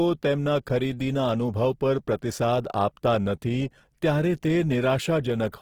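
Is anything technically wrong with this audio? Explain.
Yes, there's audible Opus compression running through the whole speech clip, start to finish. It sounds rough and grainy rather than swirly: the encoder has kept the energy in each band, so there aren't obvious holes, but where it ran short of bits the detail got filled with folded or noisy content, and voiced tones come out fizzy. Bandwidth still reaches about 20.4 kHz. The likely culprit is Opus music mode at a starved rate, something like 16 kbps.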